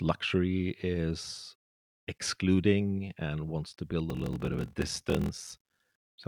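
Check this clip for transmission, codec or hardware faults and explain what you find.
One fault is present, a block size mismatch (padded), running from 4.08 s to 5.85 s, just after "and wants to build". Each block handed downstream is shorter than the stage reading it expects, and the shortfall is zero-filled, which fits a 1024-sample read block. Those repeated silences put a buzz at about 43.1 Hz over the speech, which plays at 0.861 times normal speed while keeping its timbre. The waveform shows regular flat notches, and the spectrogram shows evenly spaced vertical gaps.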